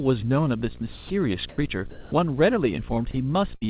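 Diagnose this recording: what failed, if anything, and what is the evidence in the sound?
A 60 Hz buzz with hash above it runs throughout, about 20 dB below the speech. This is video or display buzz, a screen or video cable coupling into the analogue wiring.

At 0.92–1.1 s, 1.49–1.58 s and 3.11–3.14 s, speech gives way to steady noise and then returns. This is sound dropped by the voice detector, likely in call processing misjudging sound as background.

From 1.91 to 2.12 s, the real background turns into a smooth, featureless noise at almost the same level. This is comfort noise in place of the background, likely from the sender's discontinuous transmission.

At 3.56–3.64 s, the last sound is held and fades for about 50 ms, then speech resumes with about 60 ms missing. This is a burst of packet loss on the network, concealed by the receiver.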